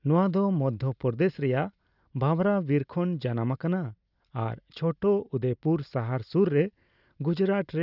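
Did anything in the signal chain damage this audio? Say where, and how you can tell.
No, nothing along the chain from capture to playback has left an audible mark on this speech.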